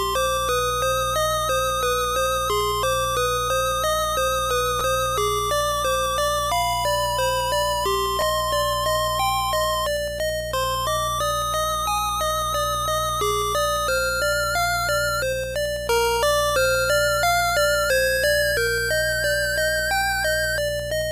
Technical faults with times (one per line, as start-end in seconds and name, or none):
4.79 repeated buffer
8.21 repeated buffer